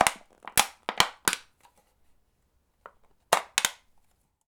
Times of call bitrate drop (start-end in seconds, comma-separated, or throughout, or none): none